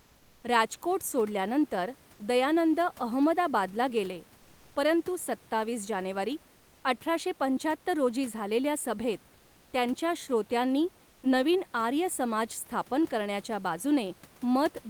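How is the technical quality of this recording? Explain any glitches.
Two short gaps in the background have been filled in artificially, while the real room noise, sitting about 31 dB below the speech, carries on around them.

Comfort noise in place of the background appears from 6.57 to 6.83 s (260 ms), after "गेले परंतु सत्तावीस जानेवारी" and before "अठराशे पंचाहत्तर रोजी झालेल्या", and from 11.09 to 11.23 s (140 ms), after "झालेल्या सभेत त्यांच्या श्रोत्यांनी" and before "नवीन आर्य". The sender likely stopped transmitting during these pauses (Opus discontinuous transmission), and the receiver substituted synthetic noise. The textured room background, about 35 dB below the loudest parts, becomes a flat, featureless hiss about 3 dB quieter. On a spectrogram, the grainy background turns into a smooth, uniform band. On the waveform, the noise floor dips slightly and looks unnaturally even.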